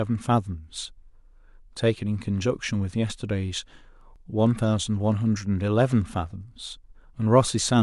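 At about 4.16 s there's an overlap between stream segments: two segments claim the same stretch of time, the player trims the duplicate, and a sliver of real speech drops out, leaving a tiny skip.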